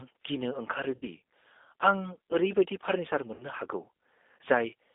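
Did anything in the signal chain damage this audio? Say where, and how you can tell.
Yes. At the codec stage, the whole clip is squeezed into a telephone band of roughly 250 Hz to 3.6 kHz, and the speech has that rough, slightly synthetic edge you get from G.729 codec coding. The damage is plainly audible, which fits G.729A running at 8 kbit/s.

There is also VoIP packet loss concealed by the speech codec, which starts on the network. Around 0.96 to 1.07 s and again at 3.34 to 3.44 s, the speech smears into a buzzy tone or coloured noise that fades. The decoder is stretching its last pitch and filter across about 60 ms of missing audio, which points to roughly three packets lost each time.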